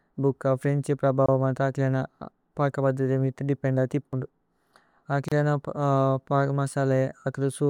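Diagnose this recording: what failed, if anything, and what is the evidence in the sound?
Codec stage, gap at a join of encoded pieces: 24 ms silence at 1.26 s after "ഫ്രേന്ഛ് പ്രഭവ", 32 ms at 5.28 s, where separately encoded 4 s pieces were joined with their encoder delay and padding untrimmed.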